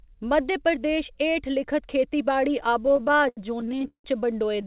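From 2.86 to 4.06 s the speech drags and hiccups, with nineteen short holds, the longest 167 ms, filling about a third of that stretch. A second, lighter burst of repeated stalls (stutter) runs from 4.52 s to the end, with four brief holds of 10 ms or less. Packets arrived late, so the jitter buffer emptied and the receiver stretched the last sound until data resumed. Nothing is lost. Across the call path, the band stops at 4 kHz, which fits G.711 mu-law.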